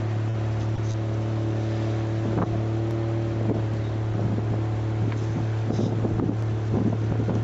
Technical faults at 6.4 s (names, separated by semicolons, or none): dropped samples